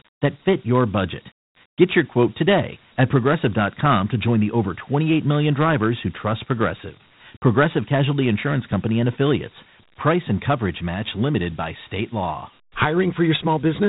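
From start to finish the speech carries Dialogic VOX ADPCM damage. Each sample is stored as a coarse 4-bit step, which fits 32 kbps at 8,000 samples a second. Nothing reaches above 3.8 kHz, so it sounds muffled. A gritty hiss trails the speech.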